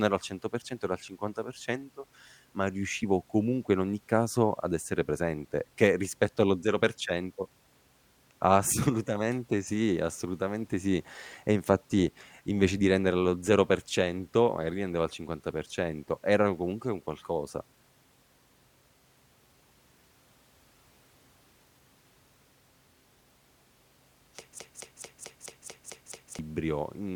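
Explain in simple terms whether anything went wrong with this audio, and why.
From 24.6 to 26.4 seconds, a 0.22-second snippet repeats eight times back to back, a broken-record loop. The playback likely stalled and replayed its last fragment.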